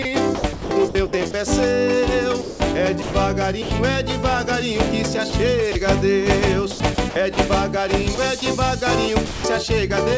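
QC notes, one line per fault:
0.02–1.34 s, 2.42–3.71 s, 5.30–5.75 s, 6.71–7.37 s, 8.15–8.42 s: sound chopped by the voice detector. The sender's detector likely toggled transmission repeatedly, and the receiver substituted comfort noise for about 450, 390, 60, 210 and 60 ms of these stretches. The sound turns choppy, with synthetic noise filling the gaps within the 8 kHz band.
9.26–9.44 s: sound dropped by the voice detector. The detector likely judged this stretch to be background and stopped sending. The receiver filled all 180 ms with comfort noise, so the sound briefly gives way to steady synthetic noise before transmission resumes.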